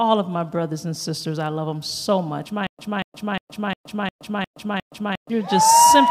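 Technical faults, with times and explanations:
2.67–5.30 s: stutter with silent gaps; one 235 ms fragment repeats seven times with 120 ms of digital silence between, likely a stalled stream retrying, not simple dropouts.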